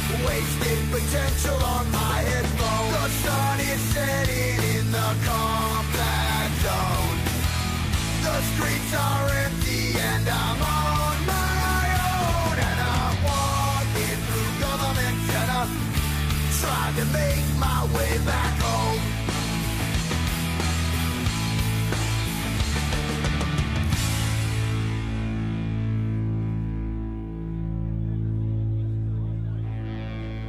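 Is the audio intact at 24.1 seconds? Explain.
Yes, the audio at 24.1 seconds is intact, with no dropout, click, distortion or other fault at that moment.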